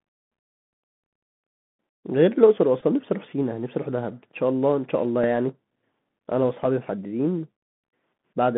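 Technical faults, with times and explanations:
throughout, Bluetooth CVSD headset codec: The whole clip is squeezed into a narrow phone-style band, roughly 150 Hz to 3.5 kHz, so nothing up top survives. The damage is plainly audible. That's the one-bit up/down coder chasing the waveform with an adaptive step, which fits a 64 kbps CVSD link. Sharp, loud high energy outruns the step and distorts, s sounds come out scratchy, and a grainy hiss sits under the speech.
2.81 to 2.84 s and 5.24 s, Bluetooth headset packet repeated: At 2.81 s there's a brief buzzy stutter lasting about 11 ms. It sounds like the chip replayed the last good packet three times in a row, so the 3.75 ms repeat produces a short burst of tone near 267 Hz before clean audio returns. The one at 5.24 s is just a small tick, which points to a single repeated packet.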